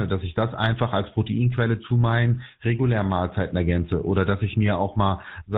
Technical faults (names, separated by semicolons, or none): GSM full-rate codec